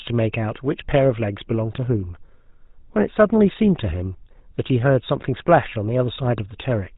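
Throughout, the GSM full-rate codec's sparse pulse excitation leaves the speech plainly buzzy and gravelly, which fits 13 kbps, and the spectrogram shows nothing above 4 kHz.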